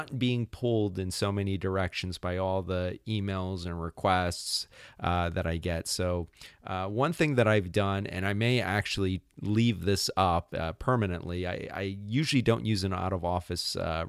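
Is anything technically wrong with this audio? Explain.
Yes. Clock slip clicks run from 0.12 s to 14.08 s: faint ticks every 30 ms or so, a soft rattle on louder speech, silent in pauses. The likely cause is unsynchronised device clocks about 700 ppm apart, each tick fitting one sample dropped or repeated, seen as tiny waveform steps and evenly spaced thin vertical lines on a spectrogram.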